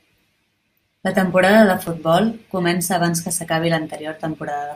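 Three sharp single clicks cut through this speech clip, at 1.87 s just after "temporada de", at 2.85 s just before "abans que s'acabi", and at 3.95 s just after "abans que s'acabi". The likely cause is dropped samples, with roughly 0.7 ms missing each time, so the waveform jumps abruptly.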